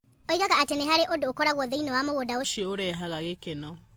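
A section at the wrong speed runs from 0.00 to 2.44 s, likely from playback against the wrong clock: the speech runs 1.39 times too fast, hurried and about five semitones high.

Transcoding between lossy codecs colours the whole clip, with several layers of different codec artefacts heard together. This likely comes from successive re-encodes, which fits a chain like WMA, then HE-AAC, then Opus.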